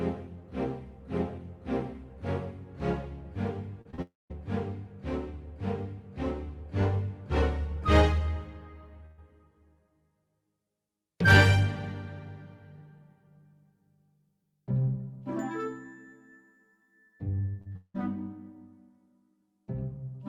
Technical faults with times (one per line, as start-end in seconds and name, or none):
3.81-4.00 short concealed packet loss
4.02-4.32 long network dropout
9.06-9.20 burst of packet loss
17.62-17.77 short concealed packet loss
17.77-17.96 long network dropout